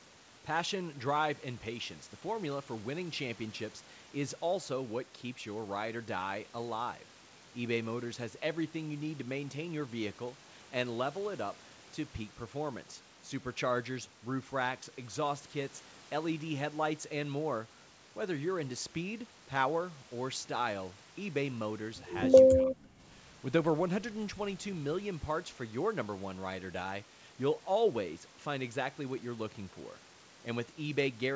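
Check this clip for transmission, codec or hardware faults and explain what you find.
One transmission fault stands out. From 22.49 to 22.96 s the speech is pushed down by up to about 30 dB for roughly half a second. This is most likely speech suppressed in double talk: the echo canceller mistook the talker for echo and attenuated it. The waveform shows a sudden trough. The content stops at 8 kHz, which fits a wideband G.722 call path.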